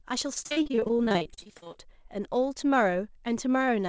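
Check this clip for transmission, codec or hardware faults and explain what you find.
One transmission fault is present: repeated packet loss (robotic sound) in the speech from 0.34 to 1.76 s. Over that stretch there are 29 short gaps, the longest 43 ms, each filled by extending the last received audio before the next loss hits. Roughly 45% of the span is concealment, so the speech comes out choppy, with fragments missing. The call path itself, with nothing above 8 kHz, is consistent with G.722 at 64 kbps.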